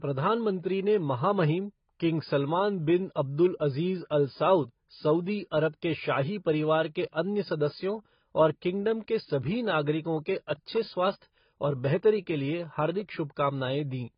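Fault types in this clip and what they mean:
Transcoding between lossy codecs: the speech sounds like it was encoded more than once, likely first as AAC-LC at around 16 kbit/s and then re-encoded as MP3 at around 40 kbit/s. Nothing remains above 5 kHz, and that cut-off, the lowest in the chain, carries through to the end. The MP3 encoder spends its bits reproducing the earlier artefacts and adds its own on top, so both sets are heard together for the whole clip.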